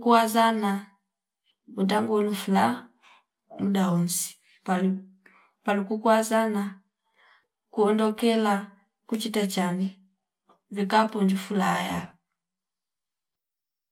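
Speech recording; no technical faults can be heard.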